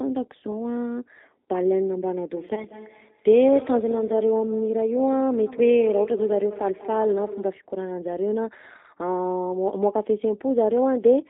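Speech carried over a G.729 codec path, with the damage plainly audible for the whole clip. The line passes roughly 200 Hz to 3.7 kHz, and the rough, slightly synthetic texture comes from the codec rebuilding each frame from a filter, pitch predictor and a few pulses, consistent with G.729A at 8 kbit/s. From 2.55 to 2.66 s there is a VoIP packet loss concealed by the speech codec. About 20 ms of audio is missing, which fits a single lost packet. The decoder stretches the previous pitch and filter into a fading sound and then takes until about 2.66 s to return to full level and clarity.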